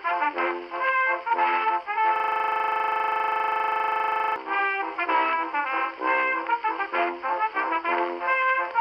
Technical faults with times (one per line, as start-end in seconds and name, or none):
2.16-4.36 system hang loop